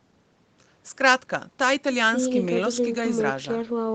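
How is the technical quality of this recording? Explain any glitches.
No glitches are audible in the speech, and the lack of content above about 8 kHz is just the normal bandwidth limit of the call path.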